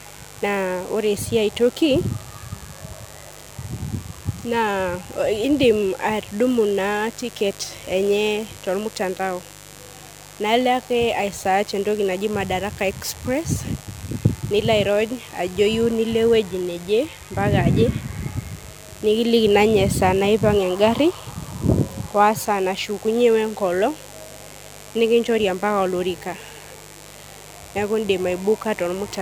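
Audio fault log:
throughout mains buzz: a steady, raspy buzz sits under the speech at about 20 dB below it. Sharp switching spikes from the 50 Hz mains supply, arriving twice per cycle, leak into the signal path, and their harmonics stack up into the kilohertz range, giving the grating edge.
throughout generation loss: the speech sounds swirly, smeared and hollow, with consonant attacks blurred and nothing above 19.9 kHz. This likely comes from repeated MP3 decoding and re-encoding at 128 kbit/s, around seven times, each pass adding fresh quantisation noise and spectral holes.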